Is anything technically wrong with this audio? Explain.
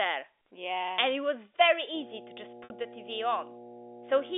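Yes. At 2.64 to 2.70 s there is packet loss with pitch repetition. About 60 ms of speech is missing, which fits three lost 20 ms packets. The receiver repeats the last pitch cycle, so the speech briefly holds as a buzzy tone, fades, then cross-fades back. The narrow telephone band from G.711 coding can be heard throughout.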